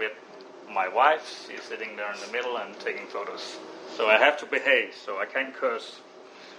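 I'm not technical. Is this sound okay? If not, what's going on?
No. All the way through, a faint hiss or grainy roughness rides on the sound, growing stronger in the loudest and brightest moments and dropping away when things go quiet. This is sample clock jitter: the recording's timing clock wavers by under a millionth of a second, so each snapshot of the sound lands slightly off-time.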